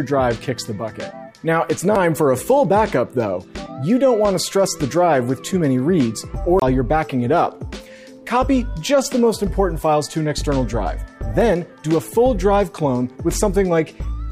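At 1.96 s and again from 6.60 to 6.62 s, a CD skip: the laser lost its track and resumed on a different turn of the spiral. Each brief mute, a few milliseconds and then about 20 ms, sounds as a tick followed by an abrupt jump in the audio.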